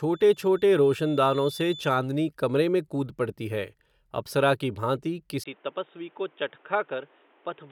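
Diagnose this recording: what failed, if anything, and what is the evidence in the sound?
A feedback whistle sits at the analogue acoustic stage. From 0.0 to 2.0 s, a thin 3.5 kHz tone that slowly swells and fades runs about 20 dB below the speech, ending before "कमरे में कूद पडती". This is likely a loudspeaker-to-microphone loop held just short of runaway.

The input was switched to a poorer device at the driver stage. After "अप्सरा की भांति", at 5.44 s, a 20 ms gap is followed by duller speech with nothing above 3.8 kHz. The level drops about 5 dB and a new noise floor sits about 30 dB down, likely from a narrower-band microphone or headset profile.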